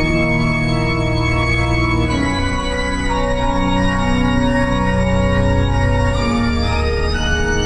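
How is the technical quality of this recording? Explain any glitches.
No technical faults are audible anywhere in this music.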